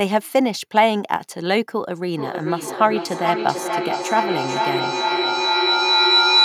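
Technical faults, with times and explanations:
2.16 s to the end (6.44 s), feedback howl: the sound picked up by a microphone is replayed through a nearby loudspeaker on the same call and re-enters the microphone with more gain on each pass. Instead of dying away, the repeats accumulate and narrow to the loop's preferred frequency, a tone around 4 kHz, with repeats about 0.4 s apart, matching the round-trip delay. It peaks at about 2 dB above the speech and never stops, because the loop is not broken before the clip ends.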